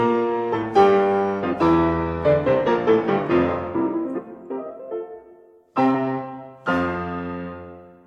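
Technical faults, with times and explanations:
1.52–1.54 s, 4.17–4.19 s and 5.94 s: compressed frames skipped. The music jumps ahead at each point, losing a few tens of milliseconds of audio, longest at 4.17 s. Whole compressed frames were missing or rejected as damaged.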